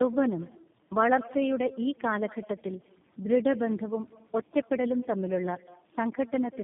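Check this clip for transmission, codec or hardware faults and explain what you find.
Two faults run through the whole recording. Echo with no canceller: every phrase is trailed, about a fifth of a second later, by a faint, thin copy about 21 dB down. The far end's loudspeaker feeds its microphone unchecked. Tandem speech coding: the speech sounds rough, muffled and warbly, with nothing above 3.5 kHz, consistent with three speech codecs in sequence, each re-encoding the previous one's degraded output.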